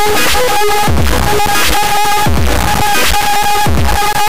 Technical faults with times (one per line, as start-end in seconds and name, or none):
0.00-4.28 integer read as float